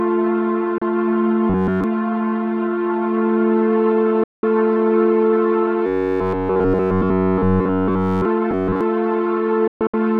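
A digital broadcast dropout at 0.78 s mutes the audio for about 32 ms with a 3 ms fade. The receiver discarded undecodable frames and held silence until valid ones returned. It recurs at 4.24 to 4.44 s as one 192 ms hole, and at 9.68 to 9.94 s as 192 ms of loss broken into several short gaps across 256 ms, the longest 128 ms.

Robotic sound from repeated short buffers appears at 1.50 to 1.84 s, 5.86 to 8.25 s, and 8.51 to 8.81 s, where most of the audio is affected. The sound becomes a rigid metallic buzz at 93.8 Hz, likely from playback looping a roughly 10.7 ms buffer while fresh audio arrived too slowly.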